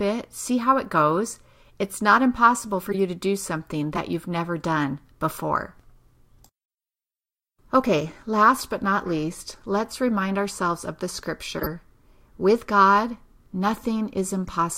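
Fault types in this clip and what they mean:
Corrupt frame decoded: damaged compressed frames were played anyway, so five brief blips of misplaced energy pop through the speech, some fairly loud.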